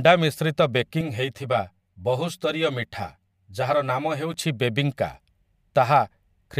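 Channel delay causing comb filtering runs from 1.01 to 4.34 s in this speech recording. One channel arrives roughly 10 ms behind the other, and when the two are summed to mono, the energy they share cancels at regularly spaced frequencies. The first notch sits near 50 Hz, with further notches repeating up the spectrum, so the speech turns hollow and phasey for that stretch before the full tone returns.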